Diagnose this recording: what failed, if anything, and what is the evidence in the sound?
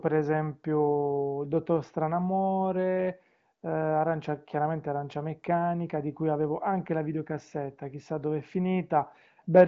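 Nothing in the recording points to a failure at any stage. The speech comes through an AMR wideband (HD Voice) codec path, with its content stopping near 7.4 kHz and a clarity that fits one of the codec's higher rates, around 18 kbit/s.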